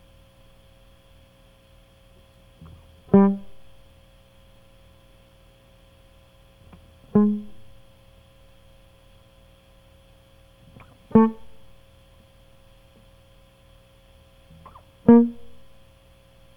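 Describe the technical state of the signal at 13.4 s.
At 13.4 s the music plays through cleanly, with no dropout, distortion, glitch or other fault in the signal at that moment.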